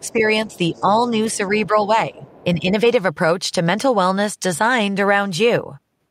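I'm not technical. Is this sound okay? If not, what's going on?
No. Two problems come from a call where the far end plays through a loudspeaker.

First, the other side's voice leaks through. A faint second voice sits under the speech from 0.0 to 0.13 s, 0.51 to 1.37 s and 2.17 to 2.44 s. The likely cause is an echo canceller that left some loudspeaker sound in the microphone.

Second, speech is suppressed in double talk. While both sides talk, the main voice briefly turns a little quieter in short pieces between 0.0 and 1.19 s, from 1.67 to 1.75 s, and between 2.11 and 2.67 s. The system likely lowered everything because it couldn't tell the two voices apart.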